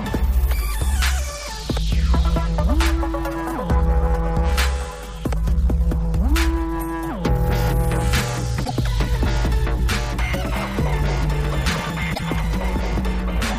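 Damaged data in a compressed stream appears from 8.61 to 8.71 s and again from 12.11 to 12.20 s, each about 0.1 s long. Corrupted bytes make the decoder misread the affected frames and lose sync until it finds a valid header, producing a short squawk or blip.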